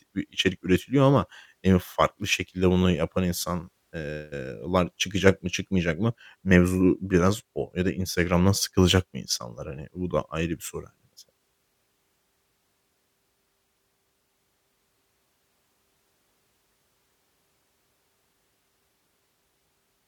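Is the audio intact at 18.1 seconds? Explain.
Yes, at 18.1 seconds the speech is intact, with no fault heard at that moment.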